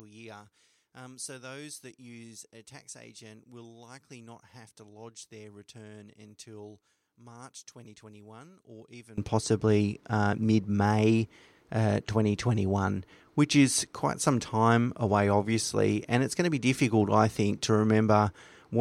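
Likely one channel inverted, 0.0 to 9.18 s: the speech drops about 23 dB as shared content cancels in mono, before "possibly uh mid".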